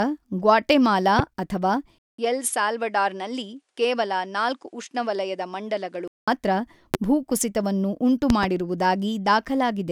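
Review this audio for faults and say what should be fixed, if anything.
Sharp loud pops cut through the speech at 1.19 s and 6.94 s, with a double pop between 8.30 and 8.46 s, each around 15 dB above the speech. A voltage spike from a plug, switch or static discharge is the likely cause. Secure connectors and ground the setup to prevent them.

From 1.98 to 6.28 s the speech turns duller and a few dB quieter, with nothing above 11.4 kHz, faint new background noise and a 200 ms gap at the change. This is likely the input switching to a poorer device. Lock the recording input to one device to prevent it.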